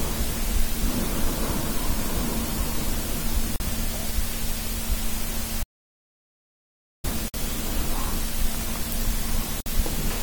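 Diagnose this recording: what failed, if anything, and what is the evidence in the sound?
Three short holes sit in otherwise continuous sound: about 42 ms at 3.56 s, 56 ms at 7.28 s and 58 ms at 9.60 s. Each has its edges smeared by the codec, and the sound resumes exactly where it broke off. That's the classic gap at a join of encoded pieces. The codec stage is at fault: separately encoded segments were butted together untrimmed, so each encoder's start-up delay and last-frame padding ended up in the stream as silence.

The bigger problem is an audio dropout to silence from 5.63 s to 7.04 s, roughly 1.4 s where the sound cuts out mid-flow and comes back just as abruptly. The gap is silent with no room tone underneath, so whatever happened in that stretch is simply gone. The likely cause is lost input upstream, such as a device disconnecting, a failed link or a stray mute, while the recorder kept writing silence.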